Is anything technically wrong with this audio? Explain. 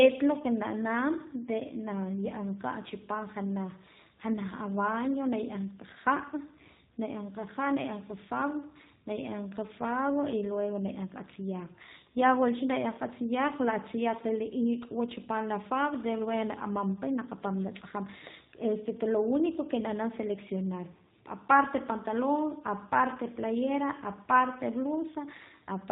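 Yes. Throughout the speech, the sound is band-limited, with a rough, synthetic edge and nothing audible above 4 kHz. That is the G.729 codec at work, with damage plainly audible, and the character fits its 8 kbit/s rate. Instead of storing the waveform, it rebuilds each 10 ms frame from a vocal tract filter, a pitch predictor and a handful of pulses, so fine detail is replaced by a coarse imitation.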